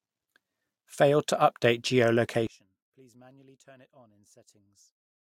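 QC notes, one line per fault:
2.47–5.31 s, one channel inverted: likely one stereo channel's polarity flipped, so the centred speech cancels against itself when summed to mono. Level falls by about 30 dB, leaving only a faint residue of the channel difference until the end.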